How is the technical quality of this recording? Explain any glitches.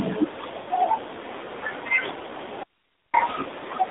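The recording has poor technical quality, with plainly audible mobile-codec damage throughout and two separate interruptions.

The AMR narrowband mobile codec is audible across the whole clip. Audio was squeezed through a vocal-tract model at a low bit rate, consistent with a 7.4 kbps mode. The band runs only from 250 Hz to 3.7 kHz, so speech sounds thin, muffled and plainly buzzy and synthetic.

The lost AMR speech frames occur from 0.62 to 0.68 s. For about 40 ms, consistent with two missing 20 ms frames, the decoder repeated its last good pitch and vocal-tract settings at falling gain. This is heard as a brief smeared dip or warble in the speech.

The audio dropout to a faint residue runs from 2.63 to 3.14 s, about half a second. Speech cuts off abruptly and leaves only hiss roughly 45 dB below the speech. The likely cause is a loss of the wanted signal while the path after the break stayed live. 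Speech then resumes just as suddenly, with no fade.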